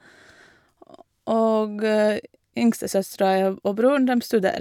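No technical faults can be heard in this speech recording at any point.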